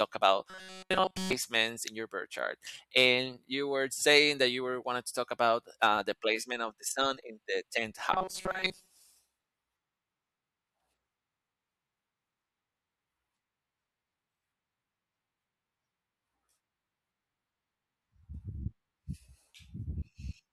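Robotic sound from repeated short buffers occurs at 0.50–1.33 s and 8.14–8.90 s: a rigid metallic buzz at 188 Hz, fitting a 5.3 ms chunk looped in place of skipped audio, likely from data arriving too seldom. It fills the first stretch entirely and most of the second.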